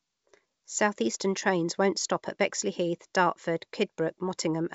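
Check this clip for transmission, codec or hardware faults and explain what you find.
Nothing here points to a transmission, codec or hardware fault: the speech comes through a G.722 wideband link at 64 kbit/s, with the top of the band stopping around 7.7 kHz as that coding does, and any trace of the coding itself is faint at most.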